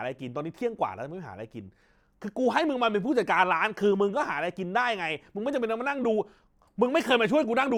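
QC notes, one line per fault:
No faults found in this speech recording; nothing to log.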